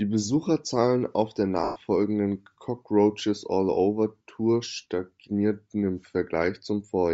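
A breathy, grainy edge sits on the speech from start to finish, with the upper spectrum sounding thin and filled in by hiss-like texture rather than real detail. The codec damage is plainly audible. This is likely Bluetooth LC3 compression, the LE Audio transform codec, working at a low rate that fits about 32 kbps with 10 ms frames. At that rate much of the high band is zeroed and replaced with shaped noise.

At 1.64 s, just after "auf der", the speech smears into a noisy wash for about 120 ms, until 1.76 s. These are lost LE Audio frames, and the gap fits roughly twelve consecutive 10 ms frames going missing. To cover the loss, the LC3 decoder repeated the last good spectrum with randomised signs, which destroys its tonal structure. It then faded that substitute down as the loss went on, so the sound dims instead of cutting off sharply.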